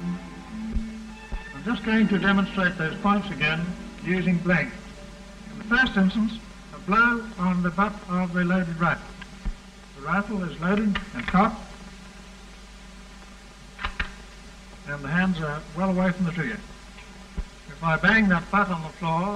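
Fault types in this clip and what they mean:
Channel delay (comb filtering): hollow, phasey tone throughout, as one channel runs roughly 5 ms late and mono summing carves evenly spaced notches from around 100 Hz upward.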